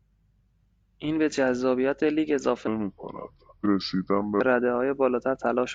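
From 2.67 s to 4.40 s, a section at the wrong speed was likely played against a mismatched clock. The speech runs at about 0.76 times its recorded rate, so it turns slow and deep, dropping roughly five semitones, then snaps back to normal pace and pitch.

Inside that slowed stretch, from 3.61 s to 3.66 s, a stream segment was skipped. One segment likely failed to load, and the player moved straight on to the next. The speech jumps abruptly forward, with a brief blip marking the join.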